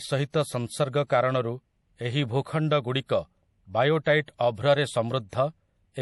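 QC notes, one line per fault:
Throughout: low-bitrate audio saved at a high bitrate. Speech has nothing above 11.5 kHz and carries smeared codec artefacts, likely from a low-bitrate MP3 re-encoded at a higher rate.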